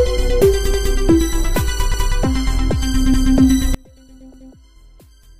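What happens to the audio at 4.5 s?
At 4.5 s two faults overlap. The first is a case of one channel inverted, most likely a polarity reversal on one side of the stereo pair. From 3.74 s to the end of the clip, anything common to both channels cancels when the two are summed, so the level drops by about 28 dB. Centred content and low end almost disappear, leaving only a faint residue of whatever differed between left and right.

The second is overlapping chunks, spanning 4.34 to 4.54 s. The audio was handled in blocks of 1.0 s, and this block began 200 ms before the previous one had finished. That 200 ms stretch is therefore played twice in a row, which is heard as a stutter or a click at the join, just as the sound is already weakened by the cancellation.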